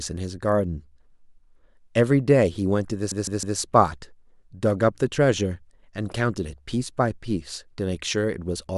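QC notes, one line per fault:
3.11–3.58 s, repeated frames: the same 156.7 ms chunk of speech plays three extra times, so it stutters and the clip runs 470 ms longer.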